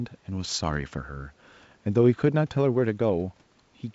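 Nothing stood out on listening to this speech, which carries the band limit of G.722 wideband telephone coding, with no content above about 7.7 kHz.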